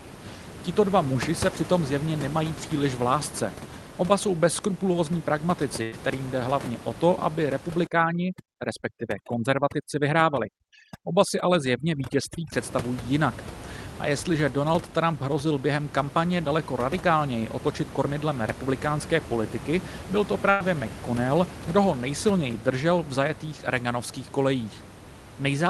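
At 1.13 s there is a short concealed packet loss: about 20 ms of the call arrived too late, and the receiver patched it by extending the preceding sound before blending back. It is only a brief smear or wobble, which separates it from the longer bursts.

Between 5.83 and 5.94 s comes a burst of packet loss. Roughly 100 ms of audio is lost, and the concealment drags the last sound on as a fading buzz or hiss before the sound jumps ahead. The sound does not pause. Instead, part of it is skipped, unlike a dropout that leaves silence.

From 7.87 to 12.52 s the noise removal is overdone. The room noise, normally about 13 dB below the speech, collapses into near silence speckled with twinkling artefacts. It lasts seconds and has no skip, unlike packet loss.

A second burst of packet loss at 20.50 to 20.62 s repeats the earlier pattern. About 100 ms is replaced by a decaying continuation with no silent stretch, and the audio resumes further along.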